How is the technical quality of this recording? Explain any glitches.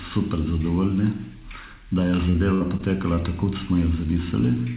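The recording carries a narrowband call-path sound with nothing above 4 kHz, fitting G.711, and has one glitch. From 2.30 to 3.19 s there is repeated packet loss (robotic sound): four gaps, the longest 67 ms, were patched by extending prior audio. This gives a choppy stutter rather than a single clean dropout.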